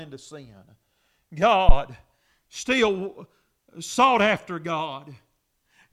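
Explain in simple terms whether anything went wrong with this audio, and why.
Power to the microphone was switched on or off on a live input, causing a phantom power thump at 1.69 s: a deep, near-clipping thud that dies within 11 milliseconds, ending by 1.74 s.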